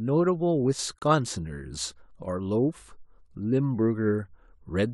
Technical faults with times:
0.73-0.79 one channel drops out
0.99-1.02 gap between stream segments

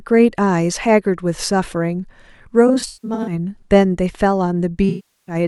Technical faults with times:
2.67-3.33 AAC frame loss with concealment
4.89-5.35 AAC frame loss with concealment

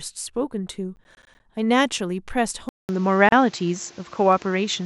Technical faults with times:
0.96-1.40 processor overload crackle
2.69-4.85 input switched to a poorer device
3.29-3.32 gap at a join of encoded pieces

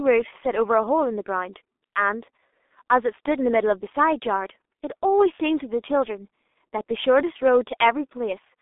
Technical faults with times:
0.00-8.61 G.723.1 codec

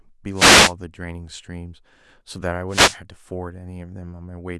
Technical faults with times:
0.34-0.74 wireless microphone noise hit
2.69-2.99 wireless microphone noise hit

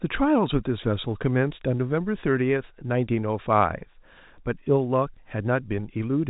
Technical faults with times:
none

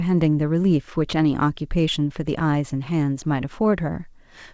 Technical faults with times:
none

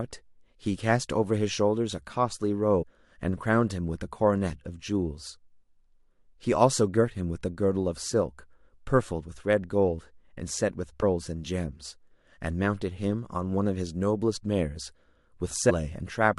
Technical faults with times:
2.81-2.83 compressed frames skipped
15.69-15.71 compressed frames skipped

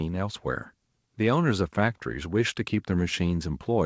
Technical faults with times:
none

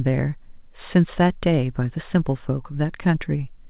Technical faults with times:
none

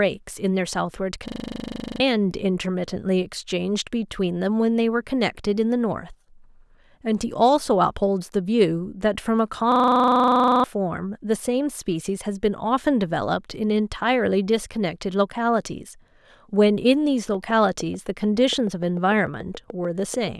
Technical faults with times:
1.28-2.00 system hang loop
9.72-10.64 system hang loop
17.34-20.29 train of clicks

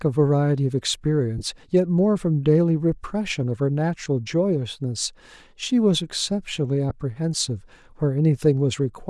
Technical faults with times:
0.00-9.10 Bluetooth LC3 compression
1.38-1.43 lost LE Audio frames
4.05 lost LE Audio frames
6.90 lost LE Audio frames

